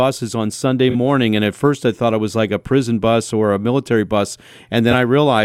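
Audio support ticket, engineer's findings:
AAC frame loss with concealment, AAC decoder. Dropped frames were rebuilt from the last good spectrum, leaving short smeared, noisy patches: 0.90 to 0.95 s (about 43 ms, consistent with two lost frames) and 4.91 to 4.94 s after "or a military bus" (about 21 ms, one frame).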